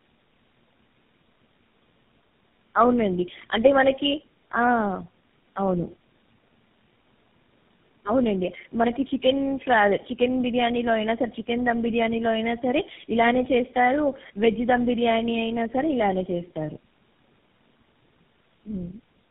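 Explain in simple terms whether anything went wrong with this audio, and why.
Tandem speech coding runs through the whole clip, from start to finish. The call passed through several phone links in a row, each squeezing the speech with its own codec, which fits about four speech coders chained together. At every handover the speech was decoded and squeezed again, so each stage worked on the damage left by the one before. The result sounds rougher, noisier, more muffled and warbly, with nothing above 3.7 kHz.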